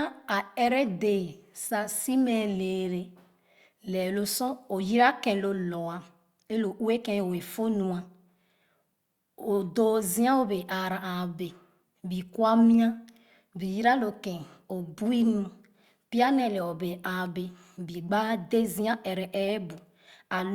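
At 4.99 to 5.02 s, just before "ken lo", a corrupt frame decoded gives a short, fairly loud glitch. Damaged bits in about two compressed frames were played anyway, misplacing energy in frequency. At 10.58 s, one frame produces a fainter glitch.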